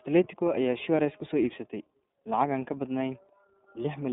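iLBC codec, throughout: each 30 ms frame is coded independently and nothing above 3.8 kHz survives, so the speech sounds plainly rough, thin and synthetic.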